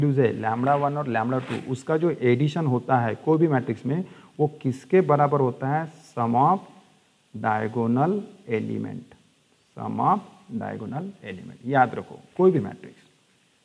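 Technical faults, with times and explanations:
Nothing stood out on listening to this clip.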